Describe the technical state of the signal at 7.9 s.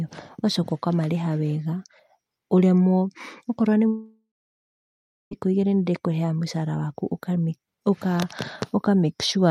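At 7.9 s the speech signal is intact, with no dropout, clipping, distortion or other technical fault audible at that moment.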